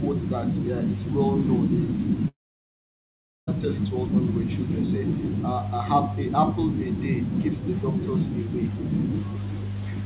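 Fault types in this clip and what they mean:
Long network dropout, 2.28 to 3.49 s: the speech breaks off for about 1.2 s, likely because packets stopped arriving. The receiver briefly stretches the last sound into a fading buzz, then near silence holds until speech resumes with that stretch missing.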